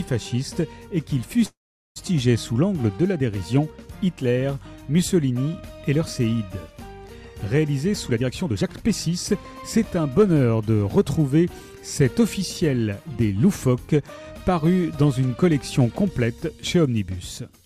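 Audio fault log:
1.45–1.99 s, call audio freeze: the sound stalls into a brief fading tail, then about 0.42 s of silence, likely from held-up packets. It resumes where it stopped, so nothing is lost.
7.93–10.71 s, jitter buffer speed-up: the audio runs at 118% speed with its pitch unchanged and sounds hurried, as tiny pitch-period slices are trimmed, roughly half a second in total.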